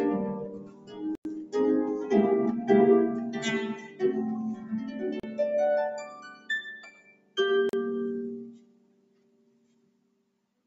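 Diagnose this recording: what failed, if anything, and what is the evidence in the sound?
Noise suppressor applied to music or sounds, throughout: call-processing suppression built for speech treats sustained tones and tails as noise, so the level pumps by around 20 dB.

Sound cut by the noise suppressor, at 0.47–1.02, 3.74–4.02, 4.55–5.38, 6.34–6.49, 6.97–7.36 and 8.53 s to the end: held sound sinks by about 9 to 11 dB while onsets survive.

Dropouts at 1.15 s (98 ms), 5.20 s (36 ms) and 7.69 s (39 ms) are likely Bluetooth stalls: the playback buffer ran dry awaiting resent packets, so the sound falls silent, then resumes.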